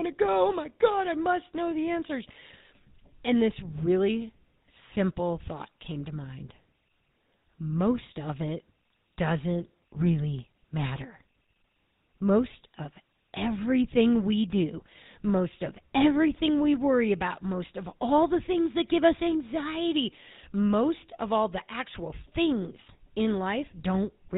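A buzzy, gravelly roughness runs through the entire speech recording, and nothing above 4 kHz comes through, so it sounds narrow and dull as well as coarse. That is the GSM full-rate codec, plainly audible here. It models the vocal tract as a filter and drives it with a sparse, regularly spaced pulse train built from only every third excitation sample, which produces the grainy buzz. The sound fits the 13 kbps full-rate mode.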